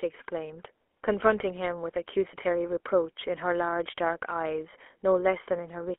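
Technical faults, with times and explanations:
Throughout, GSM full-rate codec: the speech is squeezed into a narrow phone band of roughly 300 Hz to 3.4 kHz, with a plainly audible buzzy, gravelly roughness. The excitation is rebuilt from sparse, regular pulses, which fits a 13 kbps GSM full-rate stream.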